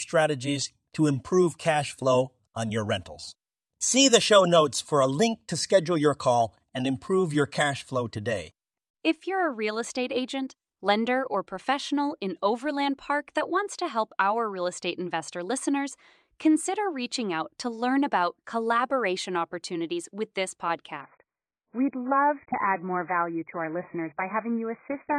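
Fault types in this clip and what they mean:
Adaptive stream at a lower bitrate: the stream switches down to a much cheaper encoding at 21.01 s and stays there to the end at 25.19 s, most likely because the connection slowed. The change is abrupt with no gap. Content above 2.5 kHz disappears, so the speech turns dull and muffled, with more audible coding artefacts. The drop in quality points to a shift from around 96 kbit/s AAC to roughly 12 kbit/s.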